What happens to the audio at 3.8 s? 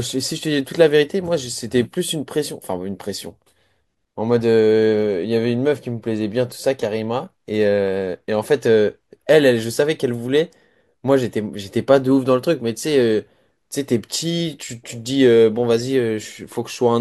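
Nothing goes wrong at 3.8 s; the speech carries on cleanly there, with no dropout, click, distortion or other technical fault.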